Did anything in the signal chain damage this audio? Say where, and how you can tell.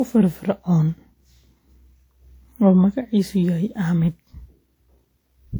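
Yes. The damage sits at the codec stage and runs through the whole clip. The speech sounds swirly and hollow, with smeared, blurred consonant attacks. That is generation loss, most likely from about seven repeated lossy encode and decode passes. The character points to an older WMA-type codec near 96 kbit/s. Each pass quantises again on a shifted frame grid, so noise and spectral holes pile up. The band still reaches about 20.1 kHz, so this is not bandwidth loss.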